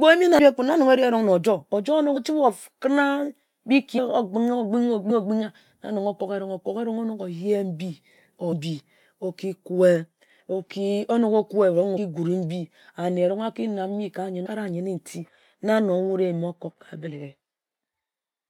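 Speech with compressed frames skipped, eight times: at 0.38, 2.16, 3.97, 5.09, 8.52, 11.96, 14.45 and 17.06 s. Each time the audio jumps forward and a stretch of speech simply vanishes. The gaps run from roughly a tenth of a second to about half a second. The longest is at 14.45 s. At 8.52 s the jump falls between "oyeh mbi" and "mbi oki". The jumps point to whole codec frames being dropped, missing or rejected as damaged.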